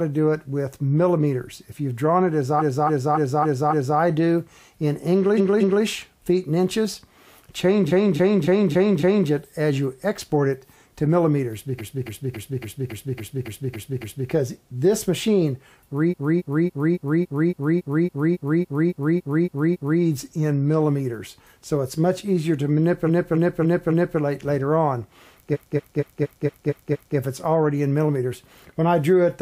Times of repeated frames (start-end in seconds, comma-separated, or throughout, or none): 2.58-3.97, 5.37-5.83, 7.87-9.27, 11.77-14.28, 16.09-19.99, 23.06-24.17, 25.52-27.15